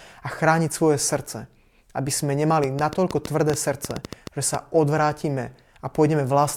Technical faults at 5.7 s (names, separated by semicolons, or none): none